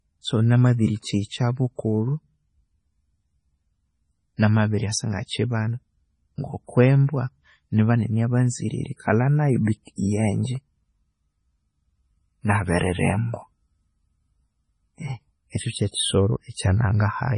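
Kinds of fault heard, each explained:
MP3 compression: the speech sounds watery and swirly with nothing above 10.5 kHz, likely from an MP3 near 24 kbps; a plain low-pass filter would dull the sound without the swirl.
pre-echo: a short hiss of 34 to 40 ms leads the sharp attacks at 8.96 s and 9.83 s; unlike reverb, it comes before the attack instead of trailing it.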